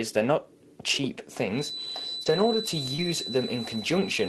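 From 1.49 s to the end there's a thin, steady feedback whistle at 4 kHz, sitting roughly 10 dB under the sound and wavering slightly. The likely cause is a speaker-to-mic loop hovering right at the edge of feedback without ever tipping over.

At 2.23 to 2.28 s and again at 2.96 to 3.00 s there's a short concealed packet loss. About 20 ms never arrived, so the decoder stretched the preceding sound over a roughly 22 ms stretch and blended back, leaving a quick smear or wobble.

Overlapping those, there are packets lost and rebuilt from error correction at 2.26, 2.36, 2.54, 2.98 and 3.02 s, each 20 ms. The Opus decoder pulled a low-bitrate copy from the following packet, so nothing drops out, but those moments come through grainier and noisier than their surroundings.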